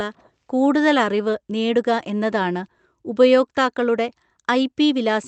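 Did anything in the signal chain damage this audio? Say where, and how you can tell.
No, nothing in the signal chain damaged this audio.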